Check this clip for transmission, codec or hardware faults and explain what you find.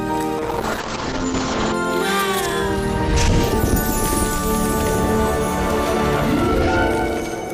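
One fault is present: a call bitrate drop from 0.39 s to 1.8 s. The encoder's bit budget collapsed from 96 kbps to 8 kbps, bottoming out for about 1.34 s, after the connection's estimated capacity fell. Starved of bits, the codec quantises far more coarsely and narrows its coded bandwidth from 20 kHz to 8 kHz, so the top end vanishes. Through that stretch the sound turns muffled, rough and watery, then regains its brightness as the bitrate recovers.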